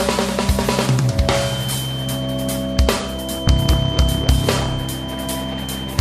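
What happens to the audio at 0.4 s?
Nothing goes wrong at 0.4 s; the audio there plays through intact, with no dropout, click or distortion at that point.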